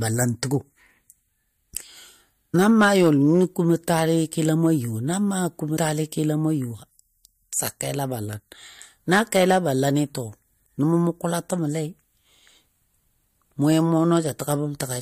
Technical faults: compressed frames skipped

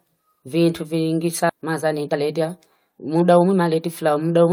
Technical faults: skip ahead; jitter buffer speed-up

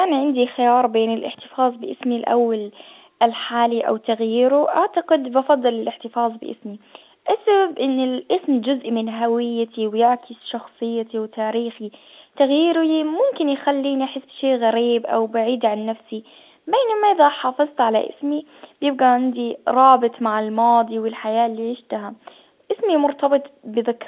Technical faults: none

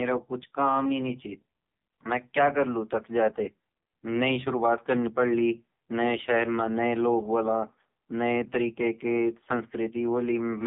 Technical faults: AMR narrowband mobile codec

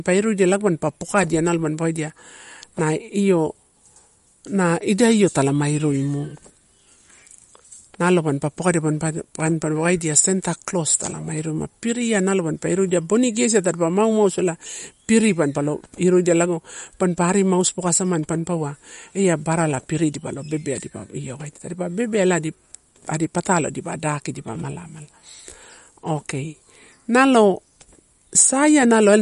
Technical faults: MP3 compression

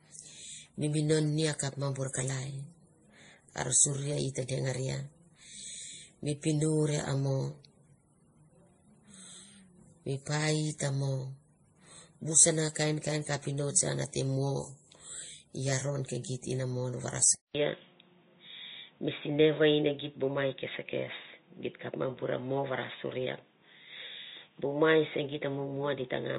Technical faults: transcoding between lossy codecs; input switched to a poorer device

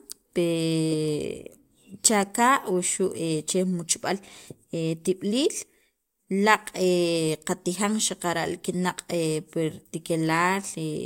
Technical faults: none

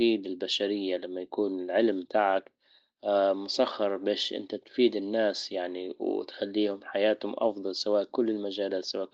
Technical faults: none

